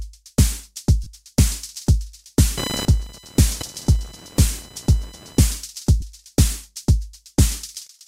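Lost LE Audio frames at 1.03 to 1.07 s: about 30 ms of the Bluetooth LE Audio stream went missing, which fits four lost frames, and the LC3 decoder filled the gap by repeating the last good spectrum with scrambled signs. Over that stretch the sound turns into a brief noisy smear rather than a clean dropout.

Computer activity noise from 2.58 to 5.42 s: processor, graphics or mouse load shifted the ground shared with the audio circuit, injecting a buzzing, chirping pulse train at around 1 kHz, roughly 15 dB below the sound. It tracks the machine's activity, not the audio, so it sits on top of everything for almost three seconds.

Lost LE Audio frames again at 6.01 s: a shorter gap of about 15 ms, consistent with two frames, concealed the same way and heard as a momentary grainy blur.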